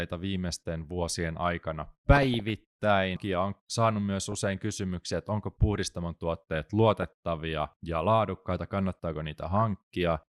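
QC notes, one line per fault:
2.15–2.50 s, 4.32–4.54 s, 6.90–7.03 s, 9.56–9.62 s, DAB burbling: brief blips of noise over the speech. Bit errors at a fraction of a percent slip past error correction, corrupting MP2 samples, so individual sub-bands carry short blips of noise.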